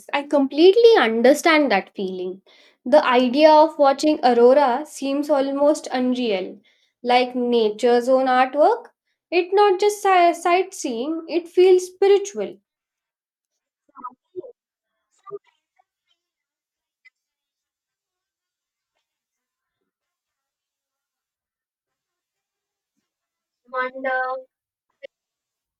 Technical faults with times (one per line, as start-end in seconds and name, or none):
none